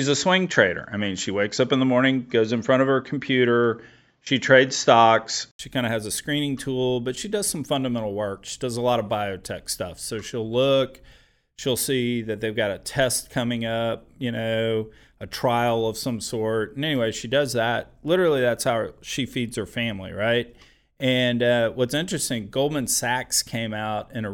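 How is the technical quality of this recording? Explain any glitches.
The first stretch has a clear glitch. From the start to 5.59 s the speech is band-limited to about 7.6 kHz, most likely an input switched to a poorer device. An 80 ms gap and a roughly 5 dB level jump come just before "kind of has a," with faint background noise.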